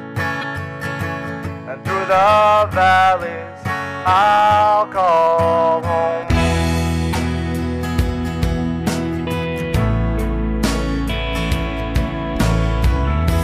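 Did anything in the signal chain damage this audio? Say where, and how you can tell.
Yes. At 0.41 to 0.44 s and 7.12 to 7.15 s the audio skips ahead with a brief chirp, noise burst or hole about one 26.1 ms frame long. The cause is likely a broken MP3 bit reservoir at the codec stage: frames went missing, so the next frame read borrowed bytes from the wrong frame.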